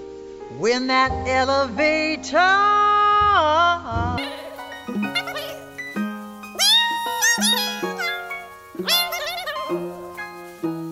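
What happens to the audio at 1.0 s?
Nothing goes wrong at 1.0 s; the audio plays through that moment intact, with no dropout, click or distortion.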